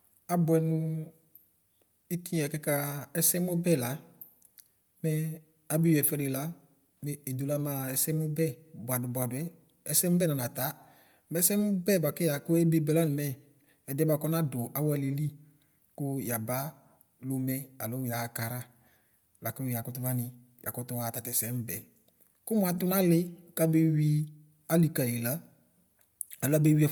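Throughout the speech, the audio has likely passed through Bluetooth LC3 compression at a setting that points to 48 kbps with 10 ms frames. The codec thins out upper-spectrum detail and fills the gaps with noise, leaving a plainly audible breathy, grainy edge, with nothing above 20.1 kHz.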